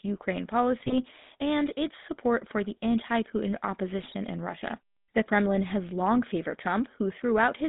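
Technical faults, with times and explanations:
Throughout, GSM full-rate codec: the speech has that familiar buzzy, gravelly grain of an old mobile call, and it's plainly audible. The codec rebuilds the voice from a vocal-tract filter fed by a thinned-out pulse excitation, which is where the roughness comes from, and the line band sits at about 150 Hz to 3.7 kHz, so there's no air or sparkle up top and not much weight at the bottom. Bitrate sounds consistent with 13 kbps.
0.80 to 0.95 s and 3.99 to 4.15 s, GSM bit errors: two short bursts of squawky, gargling breakup, the first just before "and its support for". Corrupted bits are reaching the decoder, so the filter, pitch and gain values for a handful of frames come out wrong, warping the spectrum and jolting the level. Each burst spans roughly seven or eight 20 ms frames, which fits a weak radio link at a couple of percent bit error rate.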